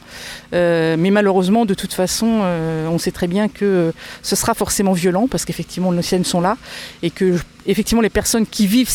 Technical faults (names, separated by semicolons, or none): none